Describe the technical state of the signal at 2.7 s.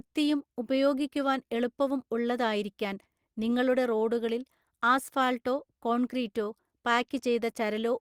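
At 2.7 s you're inside a run of repeated timing corrections spanning 0.24 to 7.86 s, where the receiver keeps patching in tiny repeated bits, adding roughly a third of a second overall. That comes from clock drift between sender and receiver: the sender's clock runs about 4% slow, so the buffer keeps draining and you get faint hiccups and a slightly dragging, uneven pace.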